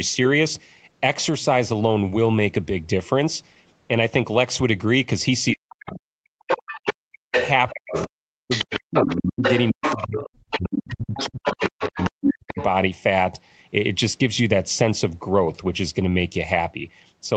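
From 5.53 to 6.37 s the talker keeps dipping out, sometimes by as much as about 40 dB, for roughly a second in total. That's speech suppressed in double talk, likely because the echo canceller couldn't tell the near talker from the loudspeaker echo and pulled everything down. Inside that stretch, around 5.86 to 6.0 s, a faint scrap of the other side's voice leaking through shows up, about 20 dB under the talker, likely residual echo the canceller missed.

Then from 6.47 to 8.08 s that other voice comes through properly, roughly as loud as the talker. Meanwhile the talker gets chopped again between 6.79 and 7.35 s, about half a second of gaps. The big one runs from 7.72 to 12.58 s, where the talker is suppressed in pieces, again down by around 40 dB at worst, with about three seconds lost altogether. From 8.5 to 12.64 s the leaked far-end voice sits only around 5 dB below, so the two really overlap. 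The whole thing is band-limited to 8 kHz by the Opus call path, so both voices share that same dull top end.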